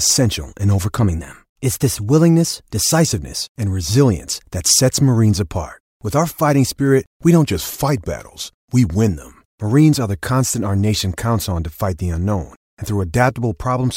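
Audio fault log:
0.95–3.07 s and 7.48–9.08 s, drift correction step: the speech runs 5.4% fast and about 91 cents sharp until just before "and resilience that sets". After "fighting spirit we don't" it runs 5.4% slow and about 96 cents flat, then snaps back. The likely cause is a clock-matching resampler stepping its rate.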